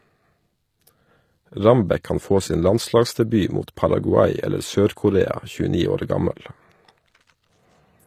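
Throughout the speech, a low-bitrate encode, likely HE-AAC compression near 24 kbps, rebuilds the treble from copied lower bands, leaving s sounds plainly gritty, metallic and lispy.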